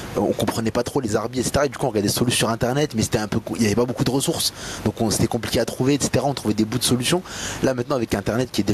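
Gain pumping runs through the whole recording, with the level swinging by something like 20 dB. The likely cause is input gain set far too high for the microphone, with a fast limiter or compressor clamping down on each loud syllable and then releasing in the gaps. The room noise sits about 31 dB below the speech, and the speech itself sounds squashed and flat in dynamics.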